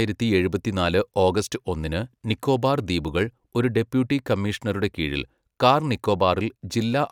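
No technical faults can be heard in this recording.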